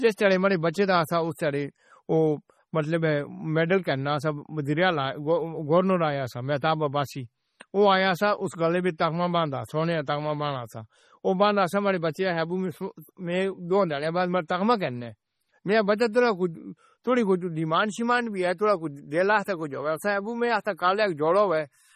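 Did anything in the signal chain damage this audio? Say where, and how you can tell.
Yes. MP3 compression damage runs throughout the speech, at the codec stage. Nothing sounds above 15.5 kHz, and the heavy watery swirl and chirpy sibilants point to weak frequency lines toggling between frames, likely from an encoder starved of bits, which fits roughly 32 kbps.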